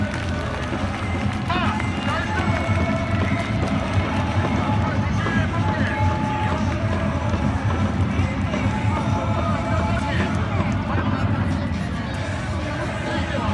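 Nothing in the audio stood out as a technical problem on listening.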